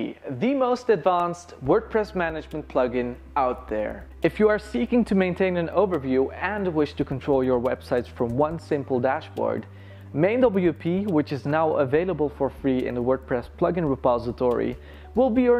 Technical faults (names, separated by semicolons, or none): block of digital silence